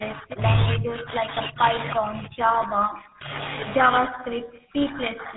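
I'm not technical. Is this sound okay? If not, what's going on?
No. Tandem speech coding runs throughout: the speech was squeezed by a phone codec twice in a row, so it sounds rough, muffled and warbly, with nothing above 3.9 kHz. Speech suppressed in double talk appears from 0 to 0.45 s and again from 4.05 s to the end: the voice dips, then fades almost to nothing, likely because the call's echo control mistook it for the other side talking.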